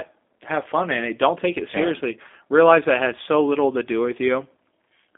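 From start to end, the speech carries G.729 codec damage, most likely the low-complexity G.729A variant. The codec rebuilds each 10 ms frame from a vocal tract filter, a pitch predictor and a few pulses, so voicing sounds plainly rough and synthetic, consistent with an 8 kbit/s stream. The line band runs from about 250 Hz to 3.5 kHz, with nothing above 3.6 kHz, giving a thin, muffled telephone tone.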